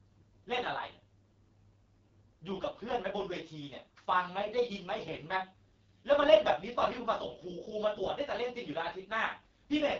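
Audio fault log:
Throughout: AMR wideband (HD Voice) codec. The speech is rough and raspy, with nothing above about 7.4 kHz. That heavy damage fits AMR-WB's lowest 6.6 kbit/s mode, where the pulse-excited vocal tract model gets too few bits to model the voice.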